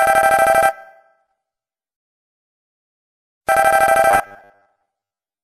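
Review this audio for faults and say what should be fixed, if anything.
A rebuffering stall runs from 2.00 to 3.39 s. Playback exhausted its downloaded audio, fell silent for 1.39 s, then resumed exactly where it stopped. Prevent it by holding a deeper playback buffer or switching to a lower bitrate before the buffer drains.

From 4.11 to 5.43 s the sound turns into a rigid, metallic 100 Hz buzz. The likely cause is robotic sound from repeated short buffers, where a roughly 10 ms segment is replayed while about half the real audio is skipped. Prevent it by delivering audio blocks on schedule and using smoother loss concealment instead of looping the last buffer.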